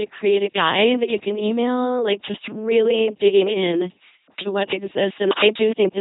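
From start to finish the speech passes through an LPC-10 vocoder at 2.4 kbit/s. Each moment is rebuilt as either pulse-driven buzz or noise through a short tract filter, giving a mechanical robot voice. A spectrogram shows rigid harmonic stripes or flat hiss, with nothing above 3.9 kHz.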